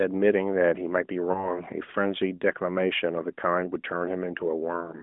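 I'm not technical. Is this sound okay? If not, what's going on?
No. At about 1.32 to 1.53 seconds there is a short glitch from lost AMR speech frames. One 20 ms piece of phone audio was lost in transmission. The decoder filled the gap by repeating the previous sound more quietly, so you hear a brief dip or warble.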